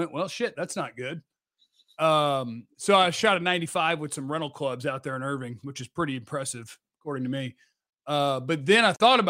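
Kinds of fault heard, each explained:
No audible faults are present in this recording.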